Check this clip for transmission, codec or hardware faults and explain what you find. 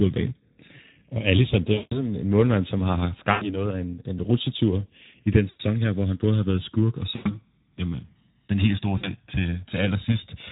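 Two faults here: the whole clip runs through the Speex codec, and there are five spots where packet loss was patched over by the codec's concealment.

Speex codec, throughout: at about 11 kbps, there aren't enough bits left for the excitation, so the speech comes out noticeably hoarse and grainy. That's the CELP model running short of detail.

VoIP packet loss concealed by the speech codec: this happens at 1.73–1.94 s, 3.31–3.58 s, 5.49–5.61 s (between "en rutsjetur i den" and "her hvor han både"), 7.15–7.40 s (after "har været skurk og") and 8.97–9.10 s (after "helt store"). The decoder keeps extending its last pitch and filter and turns the gain down, so you hear the sound smeared into a buzzy tone or a coloured noise that fades out. The speech stays weak for a moment after it comes back.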